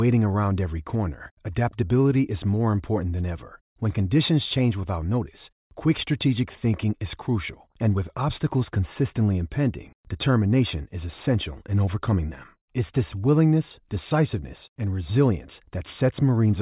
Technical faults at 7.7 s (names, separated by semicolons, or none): none